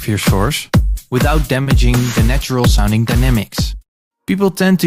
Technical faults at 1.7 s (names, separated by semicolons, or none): short stall from a late packet